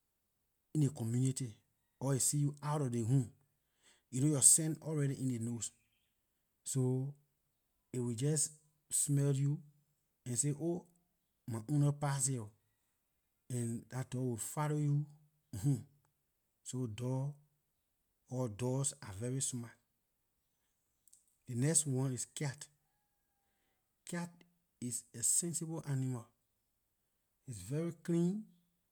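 No technical faults are audible.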